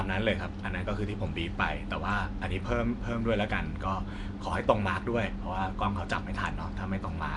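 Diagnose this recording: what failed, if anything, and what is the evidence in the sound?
The failure is at the codec stage: throughout the speech there is a rough, hissy halo and a smeared, underwater quality, plainly audible, that points to Nellymoser compression, likely the Flash-era Nellymoser Asao codec at around 44 kbps. With a fixed two bits per sample, weak bands get nothing and are filled with noise. A spectrogram would show a hard ceiling near 10.6 kHz and speckled noise patches between harmonics, smeared in blocks.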